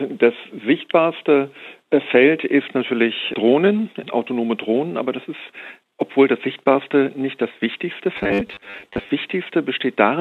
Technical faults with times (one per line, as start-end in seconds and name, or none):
8.17-9.09 robotic sound from repeated short buffers